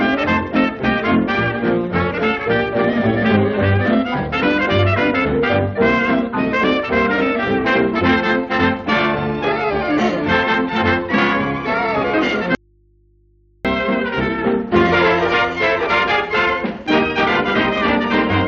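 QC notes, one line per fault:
12.55–13.65 s, audio dropout to a faint residue: the sound cuts out abruptly for about 1.1 s, leaving only mains hum roughly 40 dB down, likely from a live input losing signal, not a fade.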